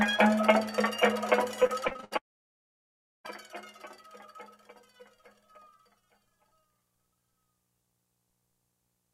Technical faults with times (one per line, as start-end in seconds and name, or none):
1.63-2.13 repeated packet loss (robotic sound)
2.17-3.26 long network dropout